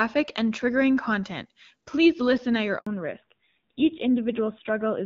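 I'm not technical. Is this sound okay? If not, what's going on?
No. Just after "listen at your", at about 2.79 s, the audio cuts out completely for 80 milliseconds and comes back at 2.87 s. This is a handover gap: the phone switched the call between networks, and nothing came through during the switch, so that sliver of speech is lost.

From 2.87 s to the end, the speech sounds duller, more muffled and rougher than the clear start. This is a fallback to narrowband: after the switch, the call dropped from HD Voice to an older phone codec that removes everything above 4 kHz.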